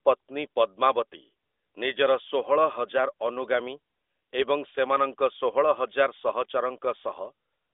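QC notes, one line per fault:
No faults found in this clip. The speech comes over an AMR narrowband mobile codec link, heard as a telephone band of roughly 300 Hz to 3.6 kHz with only light coding texture, which fits the 12.2 kbps mode.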